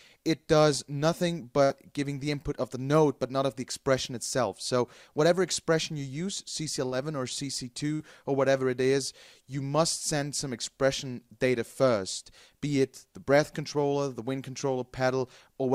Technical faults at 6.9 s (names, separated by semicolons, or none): burst of packet loss